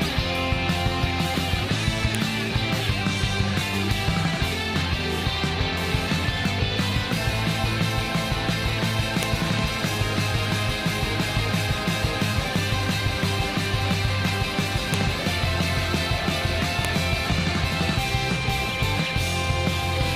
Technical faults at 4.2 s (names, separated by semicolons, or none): none